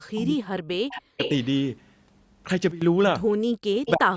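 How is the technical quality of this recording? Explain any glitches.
The recording has three kinds of call-processing fault, with the audio band ending at 8 kHz as the call's microphone chain shapes it.

Speech suppressed in double talk, 0.00 to 1.19 s and 3.42 to 4.16 s: the speech drops by as much as about 40 dB for roughly a second, then most of the last 0.7 s. The likely cause is an echo canceller turning down its own talker along with the loudspeaker echo while the two overlapped.

Echo leak at 0.89 to 0.99 s, 1.19 to 1.45 s and 3.86 to 3.91 s: short delayed copies of the speech arrive about 0.3 s late, about 20 dB and then about 10 dB below the direct sound. This is likely loudspeaker pickup that the loudspeaker side's canceller failed to remove.

Sudden gain jump, 2.71 to 2.82 s: sound and background step down together by 14 dB without a fade. The likely cause is a digital gain change applied in a single sample step rather than ramped.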